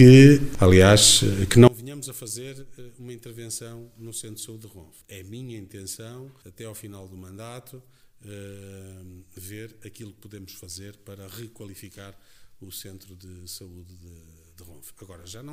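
From 1.68 s to the end, the audio collapses to a faint residue, about 27 dB lower, which points to one channel inverted, likely cancelling the shared content on a mono fold-down. The waveform shrinks abruptly, and the spectrogram fades overall.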